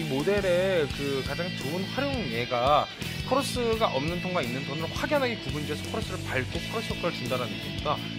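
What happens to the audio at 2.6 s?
Nothing goes wrong at 2.6 s, and the audio plays through that moment intact.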